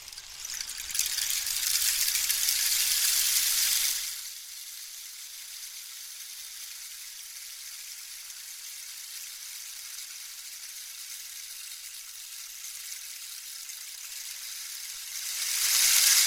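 Nothing technical stands out in this recording of sounds; there's nothing here to flag.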